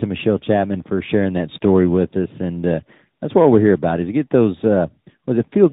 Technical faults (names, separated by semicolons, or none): tandem speech coding